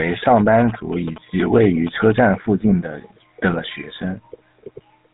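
From the first moment to the last, the speech carries the sound of the GSM full-rate codec, and the damage is plainly audible. The codec rebuilds the voice from a vocal-tract model driven by a sparse, regularly spaced pulse train, which leaves a buzzy, gravelly roughness, and it passes nothing above about 3.8 kHz. That grainy buzz, rather than simple muffling, separates it from a plain low-pass or narrowband telephone line. The roughness points to a bitrate of about 13 kbps.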